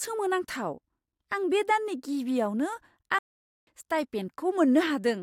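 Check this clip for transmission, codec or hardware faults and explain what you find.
One fault is present: a playback stall. At 3.19 s the speech stops mid-flow and the output stays silent for about 0.48 s, resuming at 3.67 s. The likely cause is the player's buffer running dry or its output thread being blocked, so nothing reached the output until it recovered.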